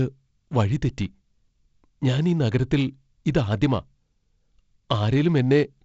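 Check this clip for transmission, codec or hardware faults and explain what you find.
No transmission, codec or hardware faults found here.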